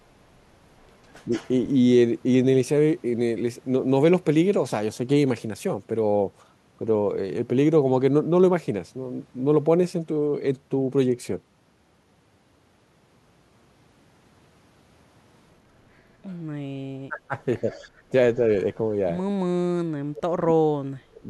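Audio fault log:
1.25 to 1.32 s, 17.08 to 17.35 s, 17.62 to 17.69 s, 19.3 to 21.27 s, speech suppressed in double talk: the voice ducks, mildly at first (about 10 dB, then about 25 dB, then a light dip of about 5 dB), and the last one nearly wipes out the final two seconds at around 40 dB down. That's likely the echo canceller treating overlapping talk as echo and turning everything down.
1.33 to 1.49 s and 17.7 to 17.79 s, echo leak: a faint delayed copy of the voice trails in about 151 ms behind, roughly 20 to 25 dB under the speech, each time right after a dip. Likely the far end's canceller letting some loudspeaker pickup slip back.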